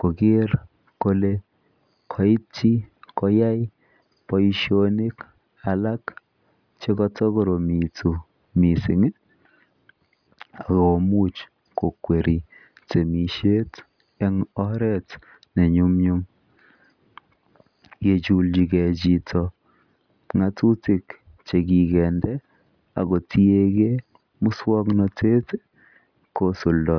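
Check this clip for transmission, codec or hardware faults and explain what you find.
No transmission, codec or hardware faults turn up in this clip.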